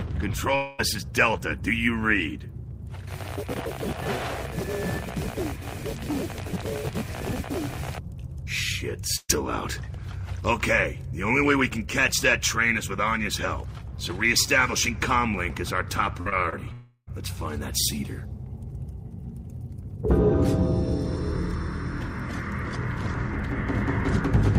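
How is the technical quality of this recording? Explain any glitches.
The recording is marred by network packet loss: six gaps where audio failed to arrive and was patched over, four of them clustered between 16.2 and 17.1 s.

Long network dropout, at 0.55 to 0.80 s and 16.73 to 17.09 s: the sound holds as a buzz that fades, with about 50 ms of silence at the end of the second gap. Roughly a quarter and a third of a second go missing, likely from a stalled connection. On a spectrogram the gaps appear as smeared, frozen bands, and in the waveform as a decaying envelope.

Burst of packet loss, at 9.16 to 9.31 s and 16.21 to 16.27 s: about 120 ms and then 40 ms never arrived. The receiver extended the last sound and turned it down, leaving a held buzz or fading hiss, with 30 ms of silence in the first gap. A spectrogram shows repeated harmonics thinning out, and the waveform a tapering amplitude.

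Short concealed packet loss, at 16.29 to 16.33 s and 16.49 to 16.58 s: about 20 ms each went missing. Synthetic continuation bridged each hole and blended back into the real audio, and 10 ms of the second was cut away. Both sound like a quick smear or wobble and show up as a small discontinuity in the waveform and spectrogram.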